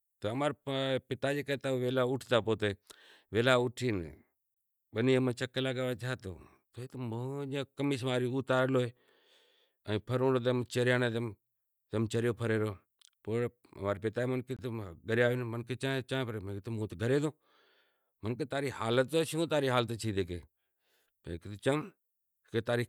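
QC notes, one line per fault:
4.54–4.57 s and 14.57–14.59 s, gap between chunks: 23 ms holes of silence, about 10 s apart, the first just before "بنی ماں چیک کرے". The sound stops and restarts abruptly at each join, with nothing lost. The waveform drops to near silence, and the spectrogram shows a hard-edged blank vertical stripe across all frequencies.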